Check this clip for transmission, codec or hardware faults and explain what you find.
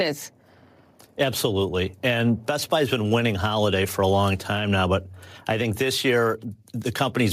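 Nothing in the speech points to a transmission, codec or hardware problem.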